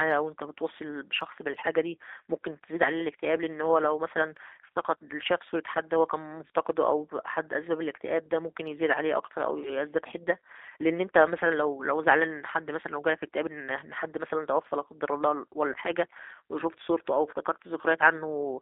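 From start to finish the speech has been through a G.729 codec. It discards the waveform and rebuilds it from a vocal tract model and sparse pulses, a roughness that fits 8 kbit/s. Only 250 Hz to 3.7 kHz remains, leaving speech thin, buzzy and synthetic.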